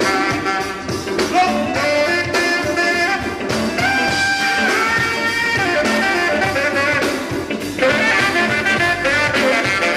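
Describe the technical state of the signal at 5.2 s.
Nothing is wrong with the signal at 5.2 s; the audio is intact there.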